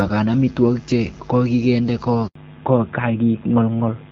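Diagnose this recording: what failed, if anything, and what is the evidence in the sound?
Handover gap at 2.27 to 2.35 s, right after "che kokinde": at the network stage, the speech drops to silence for 80 ms while the call changes links and no frames arrive.

Fallback to narrowband from 2.35 s to the end: at the codec stage, the clear HD Voice speech loses everything above 4 kHz and sounds duller, which points to a switch to AMR-NB.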